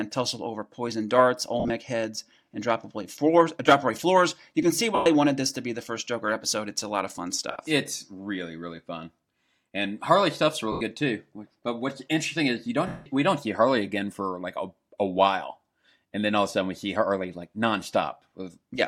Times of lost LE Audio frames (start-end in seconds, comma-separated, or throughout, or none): 1.60-1.70, 4.95-5.06, 7.51-7.56, 10.72-10.81, 12.87-13.06